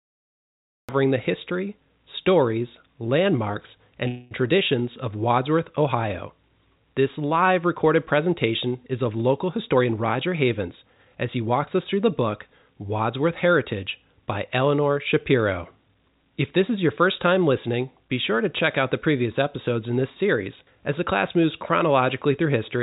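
Cut-off start, 0 to 0.89 s: the clip opens on digital silence and the speech begins abruptly at 0.89 s, already mid-sound, with no natural onset. The capture began late, so the start of that sound was never recorded, and the entry is hard-edged.

Call audio freeze, 4.08 to 4.33 s: for about 0.23 s the last sound is held on as a buzzy continuation rather than dropping to silence. It was likely caused by delayed packets emptying the jitter buffer. The receiver bridged the wait, then resumed where it stopped. Nothing is lost, but a pause was inserted.

Jitter buffer speed-up, 9.57 to 11.95 s: the speech runs about 10% fast at unchanged pitch and sounds hurried. With too much audio queued, the receiver trimmed many short pitch-period slices in succession, removing roughly a fifth of a second in total. Throughout the clip, the G.711 telephone-band path leaves nothing above 4 kHz.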